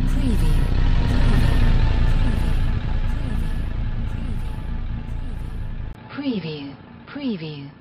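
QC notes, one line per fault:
5.93 to 7.80 s, input switched to a poorer device: after a brief 20 ms gap, everything above 5.4 kHz vanishes, the level drops roughly 10 dB, and a new hiss sits about 40 dB down, likely a switch to a narrower-band microphone or headset.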